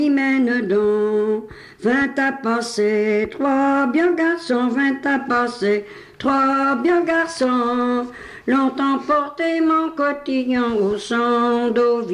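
No technical faults can be heard anywhere here.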